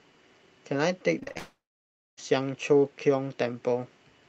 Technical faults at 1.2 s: repeated packet loss (robotic sound)

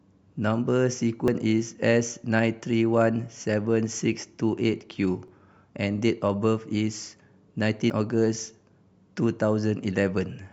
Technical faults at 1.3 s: dropped buffer (overrun)

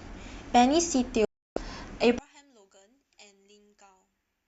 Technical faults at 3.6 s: one channel inverted

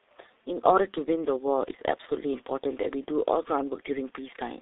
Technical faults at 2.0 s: G.723.1 codec

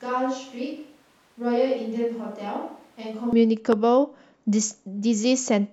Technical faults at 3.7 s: loud pop

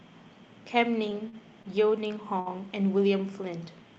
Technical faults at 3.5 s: none

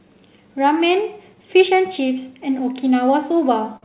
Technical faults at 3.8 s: clock drift between sender and receiver; short stall from a late packet

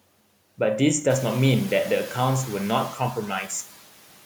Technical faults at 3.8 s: noise suppressor artifacts

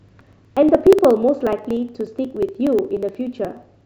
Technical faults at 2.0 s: periodic USB or driver dropouts

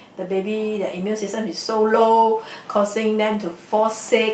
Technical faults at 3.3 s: lost packet rebuilt from error correction

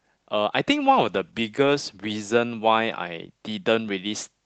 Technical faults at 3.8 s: none

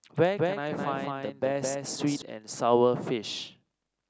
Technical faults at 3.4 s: none

